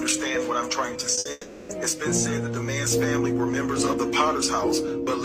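At 1.15 s there's a short concealed packet loss. About 20 ms of audio never arrived in time, so the receiver stretched the last bit of sound over the hole. You get a quick smear or wobble, and whatever fell in that 20 ms is gone.

Right after, from 1.19 to 1.27 s, comes a burst of packet loss. This time about 60 ms went missing in a row. The receiver kept extending the previous sound and pulled it down as the gap went on, so it sounds like a brief held buzz or fading hiss before the audio jumps ahead.

Then from 1.31 to 1.71 s you hear a longer stretch of the same kind of fill: a held, fading continuation lasting about 380 ms. It never drops to silence, and the real audio picks up again further on with that portion missing. That's likely a long network dropout.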